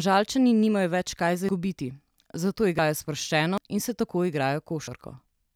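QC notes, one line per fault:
1.49 s, dropped buffer (overrun): right after "nimajo več kaj za" the speech jumps ahead, losing about 150 ms, likely because input wasn't collected in time. No silent gap, unlike a dropout.
2.79 s, dropped buffer (overrun): a skip of about 50 ms just before "sproščeno in se", likely missed samples overwritten. The sides join directly with no pause.
3.58 s, dropped buffer (overrun): a skip of about 150 ms right before "in se", likely an overrun. There's no hole of silence, just a jump.
4.88 s, dropped buffer (overrun): a skip of about 50 ms, likely a lost buffer. Continuity breaks without a gap, which separates it from a muted dropout.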